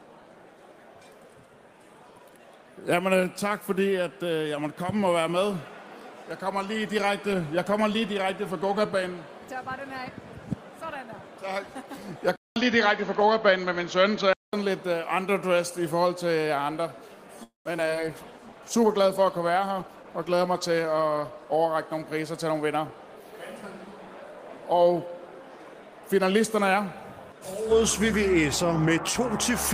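At 12.36 s the audio cuts out for 200 ms, then returns duller and narrower, with nothing above 6.9 kHz and a new background noise roughly 45 dB below the signal. The loudness stays about the same. This boxier tone lasts until 14.53 s, and the sudden change in bandwidth and noise floor fits an input switched to a poorer device, most likely another microphone or a headset's call profile taking over from the original input mid-recording. A second problem starts at 17.43 s: the sound hangs and fades for 220 ms, with about 140 ms of it silent, then picks up again at 17.68 s exactly where it left off. That is a call audio freeze, probably packets held up in transit so the jitter buffer ran dry. The receiver stretched the last sound, and the stall added 220 ms of delay without losing any audio. Right after that come three quick smears at 17.77 s, 17.86 s and 17.95 s. Each marks short concealed packet loss, where 40 ms of audio never arrived and was cut from the stream. 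At the first two, 6 ms of synthesized continuation covers the hole. At the third, the audio simply closes up with no fill. Together these trims pull back some of the delay the freeze added. From 18.00 s to 21.94 s the sound turns rough and watery, and stays at its coarsest for about 3.5 s. This is a call bitrate drop, with the encoder told to spend far fewer bits after the bandwidth estimate fell. The loss of detail fits a fall from 32 kbps to about 17 kbps before it recovers. Inside that stretch, from 19.63 s to 20.67 s, the audio also runs about 9% fast at unchanged pitch and sounds hurried. That is a jitter buffer speed-up, with the receiver shedding about a tenth of a second in small pitch-period slices to work off the backlog of late packets.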